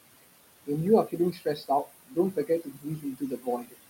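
Noise suppressor artifacts run through the whole clip: the suppressor pulls the steady room noise, which sits about 13 dB below the speech, down by about 20 dB between phrases. A spectrogram shows the noise floor pumping between phrases, with mottled, flickering specks.

Speech cut by the noise suppressor appears from 1.32 to 2.17 s, 2.33 to 3.47 s and 3.63 to 3.75 s. Mistaking quiet speech for noise, the suppressor drops it by up to about 20, 17 and 19 dB, swallowing roughly half a second, half a second and a tenth of a second. Waveform envelopes dip, and the spectrogram shows speech energy turned down along with the background.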